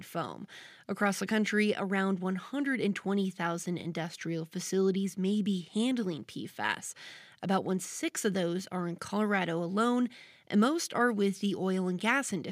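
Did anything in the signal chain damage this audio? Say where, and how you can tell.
No, nothing in the signal chain damaged this audio.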